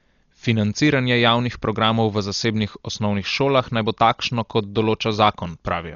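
From start to end the speech stops at about 7.1 kHz and sounds dull, with rough, fluttering noise around tonal parts where empty frequency lines were refilled with dither. That heavy damage is likely Dolby Digital compression near 40 kbps; the noisy fill, unlike MP3's watery swirl, sets it apart.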